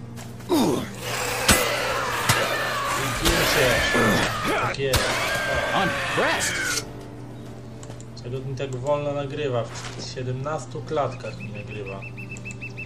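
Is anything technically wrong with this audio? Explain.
Yes. There are four short bursts of damaged data in a compressed stream, at 1.49 to 1.55 s, 4.23 to 4.28 s, 6.37 to 6.42 s and 12.26 to 12.31 s. Corrupted bytes make the decoder misread frames and lose sync. Each burst sounds like a brief chirp, squawk, click or short hole.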